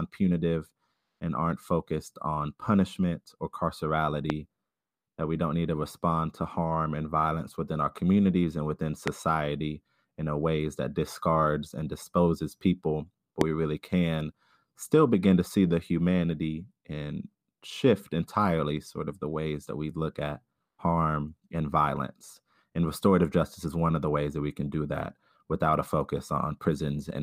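A sharp single loud pop cuts through the speech at 4.30 s, then again at 9.08 s and 13.41 s. Each lasts about 20 ms and peaks roughly 20 dB above the surrounding signal, while the speech continues underneath. The likely cause is a sudden electrical transient, such as a connector being disturbed, a switch, a static discharge or a driver glitch, injecting a brief voltage spike that the downstream circuitry shapes into a thump.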